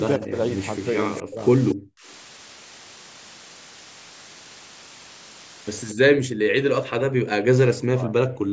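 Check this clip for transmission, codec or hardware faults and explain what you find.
Three problems stand out, all tied to the call path and how the audio was stored.

Low bit depth with dither runs through the whole clip. The sound sits on a constant, even hiss, only about 15 dB below the speech, which fits a 6-bit signal. With so few levels, dither was added before rounding, so the quantisation error comes out as steady white noise instead of gritty distortion. You hear a flat, unchanging hiss, louder than you'd want, but clean in character.

Speech suppressed in double talk hits at 0.17 to 0.38 s, 1.23 to 1.42 s, 1.74 to 2.07 s, and again from 5.94 s right to the end. The talker's level sags, mildly at first (about 15 dB) and then much harder, around 40 dB, so the speech thins out or drops away in chunks. The likely cause is an echo canceller that couldn't tell its own talker from the far side playing back and ducked everything.

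Echo leak shows up at 0.23 to 0.27 s, 1.15 to 1.22 s and 1.68 to 1.75 s. Each time a delayed copy of the speech trails in about 222 ms late. It starts around 20 dB down, is about 15 dB down at 1.15 s, and is nearly as loud as the speech, about 5 dB down, by 1.68 s. These are short scraps. That's likely the far end's loudspeaker audio getting past its canceller and coming back. The band tops out at 8 kHz, which is just the call's normal microphone processing.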